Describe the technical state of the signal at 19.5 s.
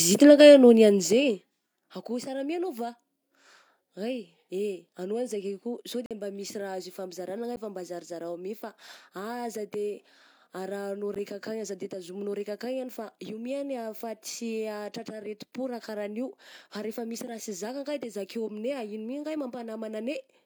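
At 19.5 s the speech signal is intact, with no fault audible at that moment.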